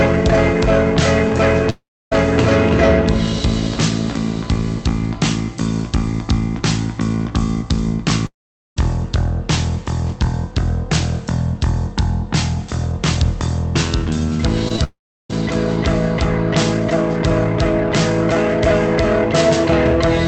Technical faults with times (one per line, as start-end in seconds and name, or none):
1.70-2.13 long network dropout
8.26-8.78 long network dropout
14.68-15.34 scattered short gaps
14.84-15.31 long network dropout